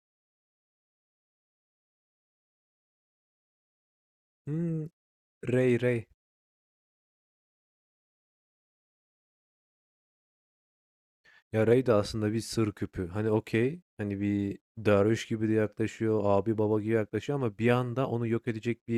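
No technical faults are audible anywhere in the speech recording.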